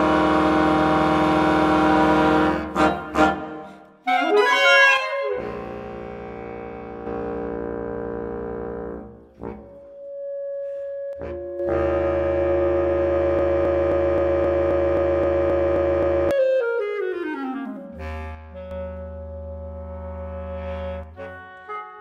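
A stereo channel was likely lost from 4.97 to 7.07 s, and this one channel drops out again from 11.13 to 11.59 s. With only one side feeding the mono sum, material shared by both channels sinks abruptly by about 6 dB, and anything present only on the missing side vanishes. The sound thins and dips, then snaps back when the channel returns.

From 13.39 to 16.31 s, the playback or streaming chain likely stalled and kept resending its last buffered fragment, producing a broken-record loop. A 264 ms piece repeats exactly, back to back, 11 times. This creates a stuttering, mechanical cycle, and the audio that belonged in those three seconds is simply gone.

The channel dropout returns from 18.35 to 18.71 s and again from 21.03 s to the end at 22.00 s, with the same sudden 6 dB drop in the shared content and the same loss of one side's material.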